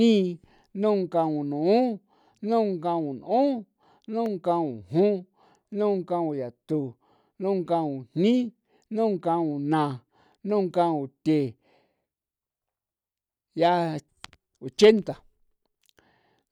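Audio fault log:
4.26 s, block of digital silence: a dropout of only about 0.25 ms lands in the speech, far too short to register as a gap, so it is heard as a single sharp tick. The samples in that block were set to zero and the signal jumps to silence and straight back without any fade. Those two abrupt steps in the waveform merge into one broadband click, which is typical of an output buffer that was not filled in time.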